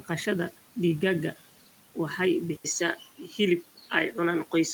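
At 2.56 s the speech drops out for about 80 ms, then returns duller and boxier until the end, with a narrower band and a new background noise about 30 dB under the voice, while the loudness stays the same. The room noise, about 23 dB below the speech, is present throughout. The likely cause is an input switched to a poorer device, with the system moving to a narrower-band microphone or headset profile mid-recording.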